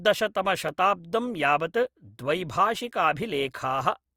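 From 0.69 s to 3.81 s, the speech carries a regular click about every 1.04 s, four times in all. These are clock drift buffer slips. The likely cause is two clocks disagreeing by around 700 ppm, so a few dozen samples drop or repeat at each slip.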